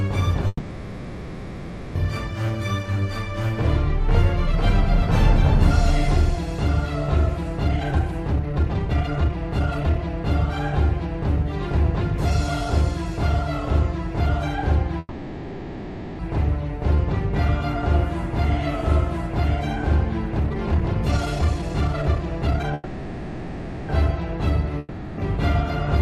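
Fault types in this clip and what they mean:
Call audio freeze: three times, at 0.47 to 1.97 s, 14.99 to 16.21 s and 22.74 to 23.91 s, the sound stalls and its last moment is drawn out as a fading buzz or hiss lasting about 1.5 s, 1.2 s and 1.15 s. Each time the audio then resumes exactly where it stopped, with nothing skipped, so the clip simply runs later afterwards. The likely cause is packets held up in transit until the jitter buffer ran dry.
Jitter buffer speed-up: from 7.69 to 14.77 s the audio plays about 21% fast, and from 20.40 to 22.74 s about 46% fast, hurried but with the pitch unchanged. Roughly 1.5 s and then about a second of material is trimmed away in many tiny pitch-period slices. The receiver, holding more buffered audio than it wanted after late packets arrived together, was working its delay back down.
Long network dropout: from 24.79 to 25.20 s the sound gives way to a short, fading buzz-like continuation of about 0.39 s. 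When the audio returns it has jumped ahead, with about 0.4 s of material never heard. This likely comes from a stretch where no packets reached the receiver at all, so it concealed the hole briefly and then carried on past the lost section.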